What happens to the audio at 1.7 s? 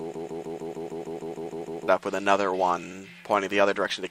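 At 1.7 s the sound is caught in a broken-record loop. It is already running when the clip begins and lasts until 1.88 s. A 152.5 ms fragment repeats back to back about eleven times, likely from a stalled player or stream resending its last buffer. The audio meant for that span is lost.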